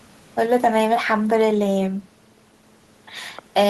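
No technical faults can be heard anywhere in the speech. There is nothing at any moment of the recording that needs a time or a description.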